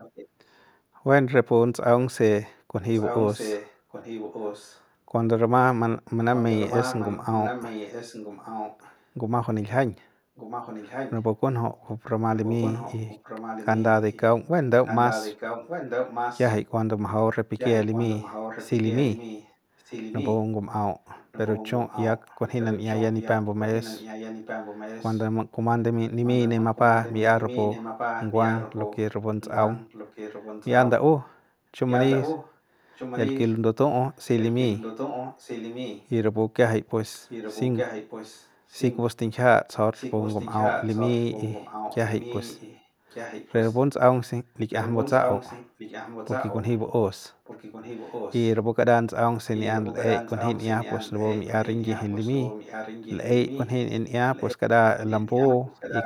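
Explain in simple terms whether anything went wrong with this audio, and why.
Echo leak at 0 to 0.28 s, 2.95 to 4.83 s, and from 6.35 s to the end: a second copy of the speech arrives about 1.19 s late, faint at first, then more noticeable. The likely cause is a speakerphone whose echo canceller let its own playback slip back into the call.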